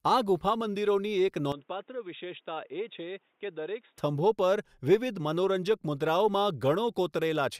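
From 1.52 s to 3.98 s the speech abruptly turns dull and boxy, with nothing above 3.8 kHz, and drops roughly 10 dB in level, then returns to full clarity just as suddenly, with no gap at either switch. The likely cause is an input switched to a poorer device. On a spectrogram the upper band goes dark across that span and a faint new noise floor appears around 40 dB down. The waveform shows a visibly smaller envelope.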